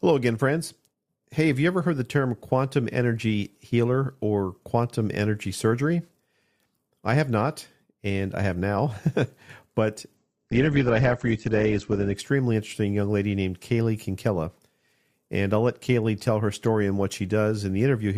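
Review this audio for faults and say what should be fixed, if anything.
From 10.17 to 12.17 s the speech abruptly turns dull, with nothing above about 8.2 kHz and more coded-sounding artefacts, then returns to full quality just before "interesting young lady named", with no gap at either edge. This is an adaptive stream at a lower bitrate: the player briefly switched to a much leaner encoding when the connection slowed, which fits a drop from around 64 kbit/s to around 12 kbit/s Opus. To prevent it, buffer further ahead or set a higher minimum bitrate.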